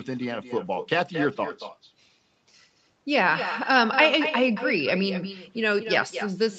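From start to finish the speech carries echo with no canceller: the far end's loudspeaker feeds back into its microphone and nothing removes it, so each phrase returns roughly a fifth of a second later, about 9 dB quieter and thinner. On a waveform every syllable burst has a smaller twin trailing it. On a spectrogram each energy band shows a weaker repeated copy shifted right, all within the call path's band, which stops at 8 kHz.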